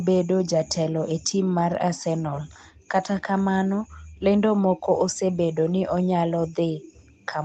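Speech, with the room background ducking away four times: at 2.73 to 2.88 s (about 20 dB down), 3.77 to 4.24 s (about 40 dB), 4.71 to 4.96 s (about 19 dB) and 6.68 to 7.28 s (about 33 dB), each lasting a fraction of a second before the ambience returns. This is background gated by the echo canceller: with far-end audio on the loudspeaker, the canceller clamped the microphone, taking the room sound down with it.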